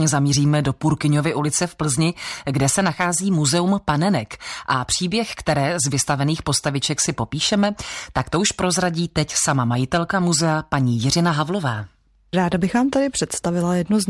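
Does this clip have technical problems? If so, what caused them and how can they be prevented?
No, there's nothing technical to flag in this speech recording, so there's no cause to track down and nothing to prevent.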